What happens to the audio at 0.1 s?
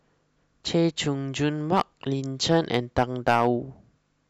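Nothing goes wrong at 0.1 s; the speech runs on intact through that moment.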